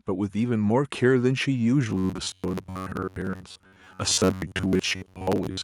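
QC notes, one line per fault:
1.02 s, microphone volume stepped up: voice and background jump together by about 3 dB in one step, unlike a speaker getting louder, where the room noise would stay put.
1.90–5.63 s, robotic sound from repeated short buffers: a rigid metallic buzz near 94 Hz covers most of this stretch, likely from roughly 11 ms segments replaying while real audio is skipped, not from a steady tonal hum.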